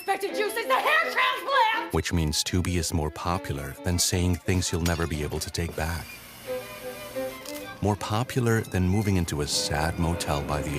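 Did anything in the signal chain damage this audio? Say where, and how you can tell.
No, no signal-chain damage heard.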